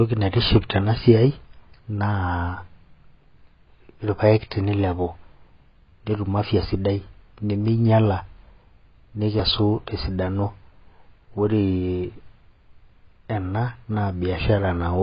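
Speech encoded with AAC compression at a very low rate, likely AAC-LC near 16 kbps, throughout: nothing survives above 5.3 kHz, and starved frequency bands leave the voice dull and smeared, with a heavy warbling, fizzy texture on sustained sounds and sibilants.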